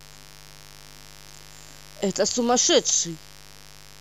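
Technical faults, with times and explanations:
Throughout, mains buzz: a steady, raspy buzz sits under the speech for the whole clip, roughly 25 dB below it. It's built on 50 Hz mains, but the edge comes from sharp switching spikes, twice per cycle, from something like a dimmer, a rectifier or an unshielded run. Those spikes spray harmonics of 50 Hz up into the kilohertz range, which is why it rasps rather than hums.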